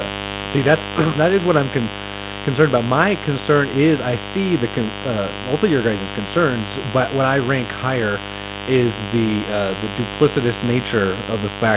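A steady, raspy buzz sits under this speech recording from start to finish, only around 10 dB below the talker. This mains buzz comes from sharp switching spikes on a 50 Hz supply, likely from a dimmer, rectifier or unshielded cable, and its harmonics spread well up into the kilohertz range. In the opening moments, from 0.05 to 1.63 s, the speech starts loud and then sinks by about 4 dB, with the buzz and background dropping along with it. This is automatic gain falling: the gain control judged the input too hot or its background noise too strong and eased its gain down. The narrow, telephone-like top end, with nothing above 4 kHz, fits a G.711 call path at 64 kbps.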